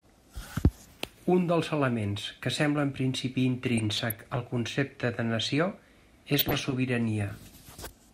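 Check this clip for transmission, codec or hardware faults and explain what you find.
DAB burbling appears twice in this speech, from 3.78 to 4.57 s and from 6.32 to 6.74 s. Weak reception lets bit errors slip past error correction into the MP2 data. A fraction of a percent of bits goes wrong. Corrupted samples put short blips of noise in single sub-bands, and corrupted scale factors make sub-bands leap in level for up to a frame. The result is noisy blips and sudden level jumps in single sub-bands laid over the speech. The density points to dozens of damaged frames.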